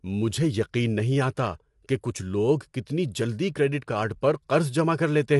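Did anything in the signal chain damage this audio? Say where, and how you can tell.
Yes. The speech is rough and grainy throughout, with nothing above 11.6 kHz: codec damage, likely low-delay AAC compression, whose short frames blur harmonics at low bitrate.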